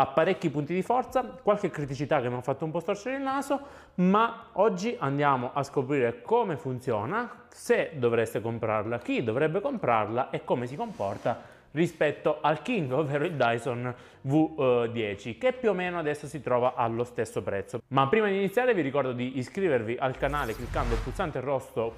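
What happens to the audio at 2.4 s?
Nothing goes wrong at 2.4 s; the audio plays through that moment intact, with no dropout, click or other fault.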